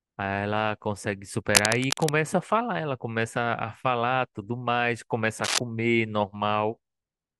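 From 1.48 to 2.09 s, and again briefly from 5.44 to 5.59 s, dense, ragged scratching rasps over the speech at roughly its own loudness: cable scratch noise, likely from a worn cable or connector being moved so its contact resistance fluctuates rapidly.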